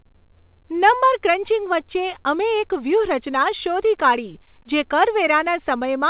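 No technical faults occur in this speech, which comes over a call path whose narrowband coding leaves nothing above 4 kHz, as a G.711 A-law link would.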